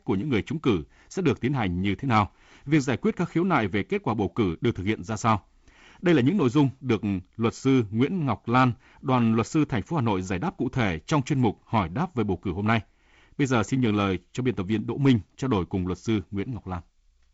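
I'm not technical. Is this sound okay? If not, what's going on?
Yes, nothing here is broken. It has the sound of a wideband phone call (G.722 wideband telephone coding), with the very top of the treble missing above about 7.7 kHz and a faint hiss that this kind of call quality normally has.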